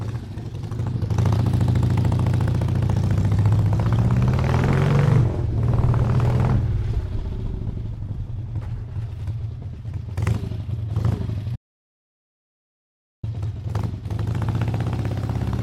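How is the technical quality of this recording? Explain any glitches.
There's one real glitch. From 11.56 to 13.23 s there's an audio dropout to silence: the sound cuts off abruptly and about 1.7 s of dead digital silence follows, with no room tone at all, before it snaps back. That's likely the input dropping out while the recorder kept writing zeros, so whatever happened there is lost.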